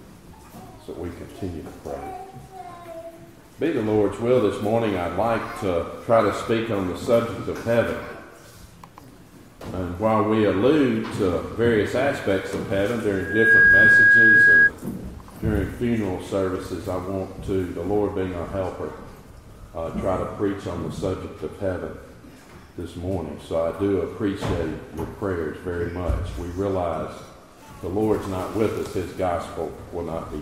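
From 13.15 to 14.71 s a microphone picks up the loudspeaker it feeds, and the loop gain tops one at 1.6 kHz: loudspeaker feedback squeal. The tone swells within about 0.4 s into a squeal roughly 10 dB above the sound.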